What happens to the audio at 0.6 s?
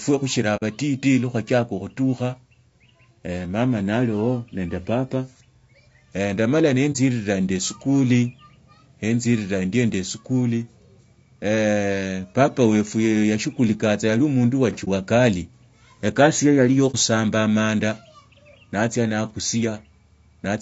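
At 0.56 to 0.63 s there is AAC frame loss with muting. About 60 ms of audio is missing, which fits two lost frames. The decoder zeroes them, so the sound fades out and back in. Throughout, the sound is rough and grainy. This is likely low-delay AAC compression at 32 kbps, whose short frames resolve harmonics poorly.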